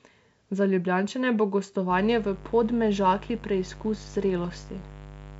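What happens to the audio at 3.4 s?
At 3.4 s a mains buzz is present, running from 1.90 s to the end of the clip. Sharp switching spikes on the 50 Hz supply leak into the signal twice per cycle. Their harmonics form a steady, raspy buzz about 20 dB below the speech.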